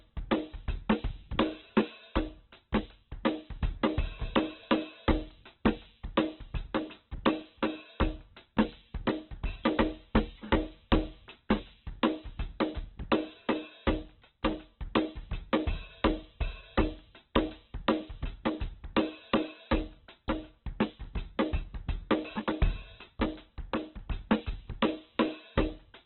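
Throughout the music, nothing survives above 4.2 kHz, and tones sound noisy, rough and grainy. Unlike MP3 damage, there is less swirling and few hollow gaps, because bands are filled in. This is likely heavy Opus compression in music mode, consistent with about 8 kbps.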